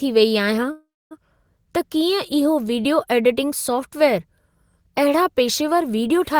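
Call audio freeze, 0.71 to 1.13 s: the last sound stretches into a fading buzz, then 250 ms of silence, and resumes exactly where it stopped. Packets were likely delayed until the jitter buffer ran dry, inserting a 395 ms gap with nothing lost.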